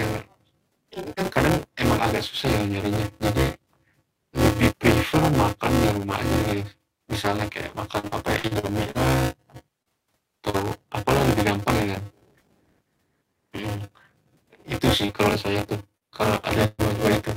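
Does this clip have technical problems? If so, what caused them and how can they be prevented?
Yes, there are four kinds of fault.

Buffer tearing runs through the whole speech clip as a steady robotic buzz at 200 Hz, heard only while someone is talking. The writing program and the playback hardware have drifted so that they cross inside every buffer period, which points to a 5 ms period. About a third of each period holds audio roughly 20 ms old, with hard joins on both sides. A spectrogram shows harmonic lines at 200 Hz multiples, and the waveform shows a step discontinuity every 5 ms. Larger buffers with proper read/write pointer synchronisation prevent it.

Repeated packet loss (robotic sound) runs from 7.99 s to 8.98 s, just after "aja gitu misalnya kayak". Six gaps totalling 240 ms were each patched by extending the last sound, and the longest gap is 42 ms. About a quarter of the span is concealment, so it sounds choppy. 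A spectrogram shows smeared, frozen harmonic blocks alternating with normal texture. A steadier network path and a deeper jitter buffer prevent it.

Short concealed packet loss occurs at 9.83 s, 10.50 s, 15.06 s and 15.97 s. The one at 15.06 s falls between "itu sih" and "kalau saya tuh kalau". Each loses 40 ms, which the decoder bridged by continuing the previous pitch or noise before blending back in. The one at 15.97 s also adds a few milliseconds of extra length. Each is heard as a brief smear or wobble. On a spectrogram they appear as short, overly smooth patches. Forward error correction or modest redundancy prevents them.

A burst of packet loss follows "kalau saya tuh kalau" at 16.66–16.81 s. About 120 ms went missing and was filled with about 127 ms of continued, decaying sound with no silence. The result is a held buzz or fading hiss before the speech resumes further on. On the waveform this is a repetitive, shrinking cycle pattern, and the spectrogram shows stretched harmonics that fade. 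Packet redundancy or a more robust network link prevents it.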